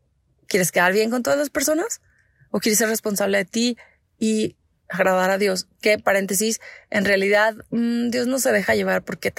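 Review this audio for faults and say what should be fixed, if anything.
Nothing to fix: no faults are audible anywhere in the speech.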